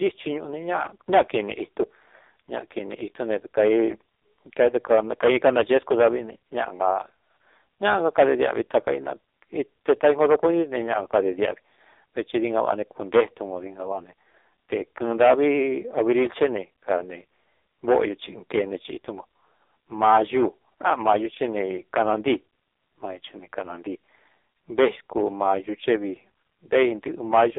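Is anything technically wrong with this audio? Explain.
Yes, the whole clip of speech has passed through an AMR narrowband mobile codec. The band runs from about 300 Hz to 3.7 kHz and nothing above 3.8 kHz survives. Heavy buzzy, synthetic coding artefacts point to AMR-NB's lowest modes, around 5.15 kbps, where a few pulses drive a vocal-tract model. On a spectrogram, expect a hard ceiling, an empty low band and smeared harmonics.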